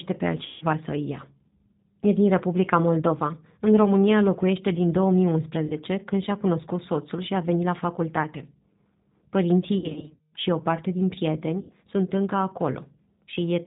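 G.729 codec damage runs through the whole 14-second speech recording. At 8 kbit/s, the voice is rebuilt from a vocal tract filter, a pitch predictor and a few pulses per frame, with nothing above 4 kHz, so it sounds plainly rough, band-limited and slightly synthetic. VoIP packet loss concealed by the speech codec breaks in at four points. From 0.46 to 0.65 s, just before "să îi ia", 150 ms of audio are missing. At 5.67 to 5.74 s, a short 30 ms gap fits a single lost packet. From 9.78 to 10.32 s, just before "și o parte din", 360 ms are lost in scattered pieces across 540 ms, with the longest run 180 ms. From 11.61 to 11.73 s, between "și o parte din" and "sunt încă", 90 ms are lost. In each gap the decoder keeps extrapolating from its last pitch and filter while lowering the gain, so the sound smears into a fading buzzy tone or coloured noise. Because every frame builds on the one before, the voice stays weak or distorted for a moment after real audio resumes.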